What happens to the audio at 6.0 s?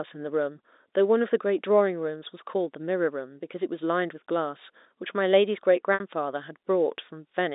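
Packet loss with pitch repetition occurs from 5.94 to 6.00 s. About 60 ms of audio, which fits three lost packets, is bridged by repeating the last pitch period. The sound briefly holds with a buzzy tone, fades toward silence, then cross-fades back.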